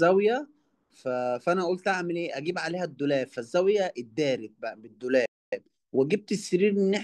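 A playback stall at 5.26 s silences the speech for about 265 ms until 5.53 s, most likely because the player's buffer ran dry or its thread blocked. Time-compressed catch-up follows from 5.53 to 6.05 s: the player drops and cross-fades small slices to clear the backlog, so speech runs about 1.5 times fast at unchanged pitch.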